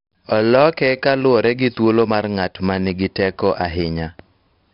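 A speech clip with 4-bit ADPCM compression all the way through, and it's heavy: a gritty hiss rides on every louder syllable, and attacks smear where the step size can't keep up. Nothing comes through above about 5.3 kHz, so it's dull, which fits a low-rate stream around 44 kbps.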